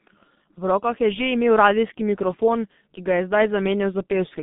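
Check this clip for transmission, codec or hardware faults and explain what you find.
The speech carries G.723.1 codec damage for its entire length. Nothing reaches above 3.7 kHz and the band runs 150 Hz to 3.6 kHz. The slow-updating 30 ms voice model, consistent with roughly 6.3 kbit/s, leaves it muffled, hoarse, with smeared consonants.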